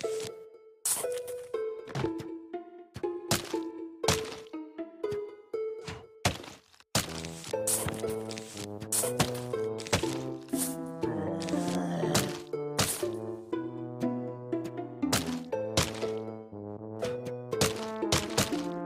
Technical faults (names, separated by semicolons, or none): none